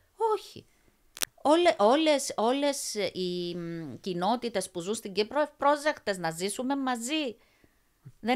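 Speech, with cable scratch noise from 1.15 to 1.32 s: dense, uneven rustling nearly as loud as the speech, likely a worn connector being moved, rather than one clean click.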